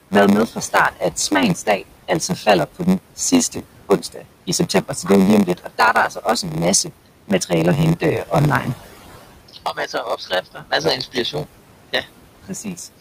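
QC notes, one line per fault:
throughout, noise suppressor artifacts: The room noise, which sits about 14 dB below the speech, sinks in the pauses and swells back under the speech. The suppressor pulls the noise down by about 20 dB frame by frame, so its gating is audible.
throughout, block size mismatch (padded): A steady 93.8 Hz buzz runs under everything, and the speech plays slowed to 0.938 times its speed at roughly normal pitch. Each 512-sample read carries a short zero-filled gap, which fits shorter blocks of around 480 samples being padded out.
0.47–3.19 s, 3.52–5.10 s, 5.46–6.91 s, 7.28–7.52 s, 8.00–8.76 s, 9.48–11.47 s, 12.43–13.01 s, speech cut by the noise suppressor: Syllables and word endings turn faint or swallowed, by about 16 to 21 dB at their deepest. The cuts come after "været med", before "det er jo lige" and after "er jo lige om". The suppressor mistook parts of the speech for noise, affecting roughly half a second or more in the longer spans and well under that in the shorter ones.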